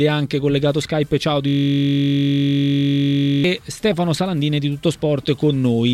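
At 1.48 s the sound freezes into a system hang loop until 3.44 s. The system stalled while the hardware kept replaying one 21.33 ms slice of its ring buffer, which fits a 1024-sample buffer. It repeats at 46.9 Hz. It sounds like a steady buzz.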